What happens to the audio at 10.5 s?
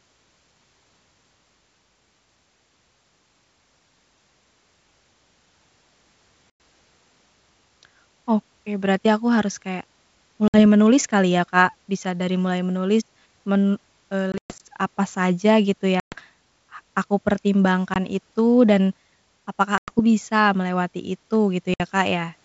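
At 10.48 to 10.60 s there is packet loss on an ADPCM call. About 60 ms of speech, likely a few packets, drops to a hard-edged silence. The decoder's predictor and step size lose step with the sender's. Speech returns slightly distorted, then settles.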